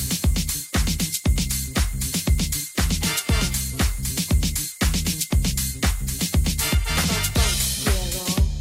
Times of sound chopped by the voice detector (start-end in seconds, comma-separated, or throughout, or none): none